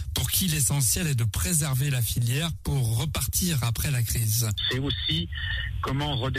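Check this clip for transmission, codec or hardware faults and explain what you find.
Nothing in the audio points to a transmission, codec or hardware fault, so there is nothing to report.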